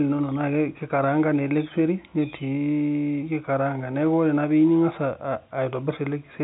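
No technical faults can be heard in this speech; it carries the narrow band of G.711 telephone coding, with nothing above about 3.9 kHz.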